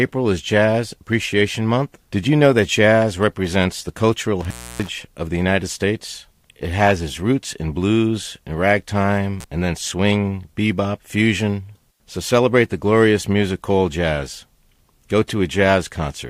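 Intermittent contact at 4.41 to 4.89 s, after "jazz represents the cultural", and at 9.39 to 9.44 s, before "and then swing bebop": a loose connection briefly opens, dropping the speech for about 292 ms, then 39 ms, with crackle at each edge and faint hiss in the gap.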